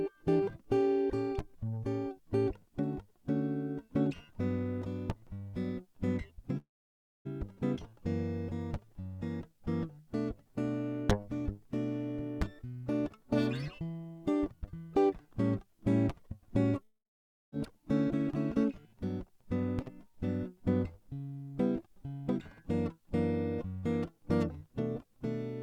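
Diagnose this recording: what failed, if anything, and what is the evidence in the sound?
Network stage, and it happens twice in this music. At 6.57 s and again at 16.83 s the sound smears into a fading buzzy tail, then goes quiet for roughly 0.6 s before the music picks up at 7.27 s and 17.54 s, skipping ahead rather than resuming where it stopped. That's likely a long network dropout: about 0.68 s and 0.70 s of audio never arrived, and the receiver stretched the last sound briefly before falling to silence.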